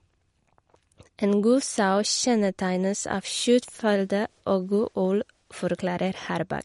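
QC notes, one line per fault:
throughout, MP3 compression: likely a starved MP3 encode, fitting roughly 48 kbps, removes everything above 11.2 kHz and drops weak detail, so speech sounds dull and watery.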